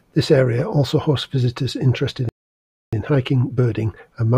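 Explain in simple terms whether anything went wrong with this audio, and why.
Something did go wrong, right after "also hosts visitors interested". At 2.29 s the speech simply cuts out and stays silent until 2.93 s, a gap of about 0.64 s in mid-flow. That's a playback stall: the player most likely ran dry of incoming audio, or got held up doing something else, so it had nothing to send to the speakers until it caught up.

From 2.93 s to the end, the talking sounds a bit rushed, running about 1.1 times normal speed while the pitch stays where it should be. That's time-compressed catch-up. After the stall the player is behind, so it trims tiny slivers out of the audio and blends the edges together to close the gap. Because the pitch isn't shifted, it doesn't sound chipmunky, just hurried.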